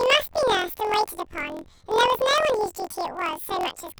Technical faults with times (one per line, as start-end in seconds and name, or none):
0.00-3.99 planar audio read as interleaved